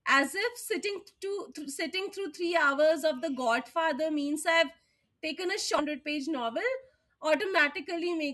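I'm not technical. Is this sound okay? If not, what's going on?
No, there's one problem. At about 5.78 to 5.83 seconds the speech suddenly jumps ahead with a tiny blip, so a chunk of what was being said is simply missing. That's likely a stream segment skipped: one piece of the stream didn't load, so the player moved on to the next.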